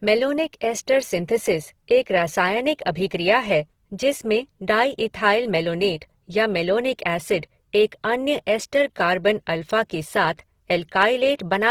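The clip is speech with plainly audible Opus compression throughout. Tones sound rough, grainy and noisy. The encoder keeps each band's energy and fills starved bands with noise, so little swirling occurs. Content reaches 20.2 kHz. The likely cause is music-mode encoding near 16 kbps.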